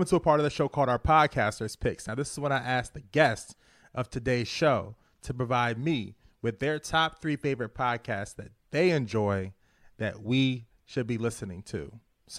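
Nothing stood out as a technical fault on listening to this speech recording.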